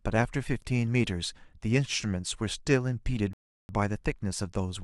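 A rebuffering stall interrupts this speech clip from 3.33 s to 3.69 s. The playback ran dry of downloaded audio, so the sound drops to silence for about 357 ms while the player waits for more data to arrive, then picks up at exactly the point where it halted. No audio is skipped or repeated; the gap simply stretches the clip by that extra third of a second.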